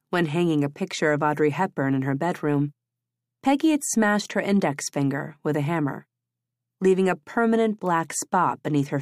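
Speech recording; no technical faults heard.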